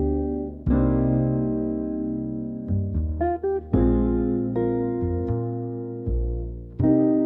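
No technical faults can be heard anywhere in this audio. There is nothing here that needs a timestamp or a note.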